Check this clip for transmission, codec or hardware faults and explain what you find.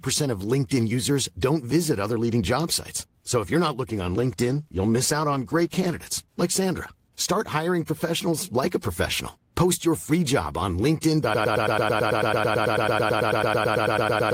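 Two faults are audible in this speech clip: a call bitrate drop partway through, and a broken-record loop that runs to the end.

The call bitrate drop starts at 3.91 s, just after "if you're not", and lasts until 6.49 s. The call's bandwidth estimate fell, and the encoder cut from 32 to 17 kbps, holding the lower rate for about 2.5 s. Coarser coding makes the sound rough and muffled. On a spectrogram, the upper frequencies thin out and then recover.

The broken-record loop begins at 11.34 s, after "your free job on", and continues until the clip ends. A fragment of about 110 ms repeats exactly, back to back, and whatever should have played is lost. A waveform shows identical blocks tiling evenly. The likely cause is a stalled stream resending its last buffered piece.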